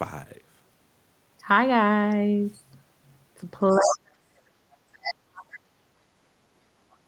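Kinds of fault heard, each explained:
Other side's voice leaking through: A second voice appears under the speech at 3.7 to 3.97 s, only a little quieter than the talker, and again at 5.02 to 5.14 s, well below the talker. Both scraps are short. This is likely loudspeaker output picked up by the microphone that the echo canceller failed to remove, leaving fragments of the far end in the send path.
Speech suppressed in double talk: From 3.76 to 4.38 s, and again from 5.15 s to the end of the clip, the talker's level falls sharply, at its deepest by about 40 dB. Both stretches coincide with far-end activity. The likely cause is that, with both sides active at once, the canceller could not separate the near talker from the echo and attenuated everything, the wanted speech included.
Background gated by the echo canceller: At 4.66 to 4.87 s the room noise drops by about 14 dB for around a fifth of a second, then recovers. 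The dip comes from the echo canceller clamping the microphone gain while the loudspeaker was playing, so the ambient floor is pulled down with the suspected echo and returns once the suppression releases.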